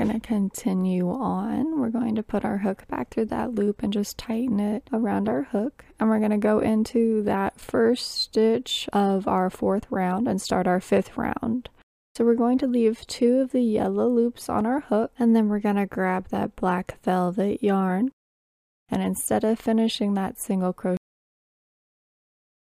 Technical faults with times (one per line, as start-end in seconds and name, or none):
20.97-22.77 cut-off end